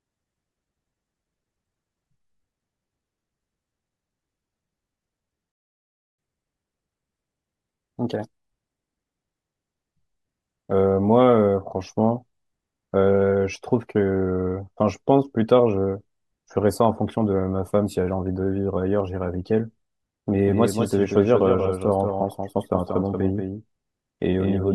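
Speech runs slightly fast and high from 6.19 to 9.19 s, at 1.1 times normal speed and roughly a semitone and a half up, before settling back. That is catch-up at higher speed: after a stall, the player resamples its backlog to recover lost time. From 20.48 s to the end, a second full-band copy of the speech trails about a fifth of a second behind, a few decibels quieter, with no decay or room colour, and it enters abruptly. This doubled audio track likely comes from the same audio being captured again through a slower path and mixed in.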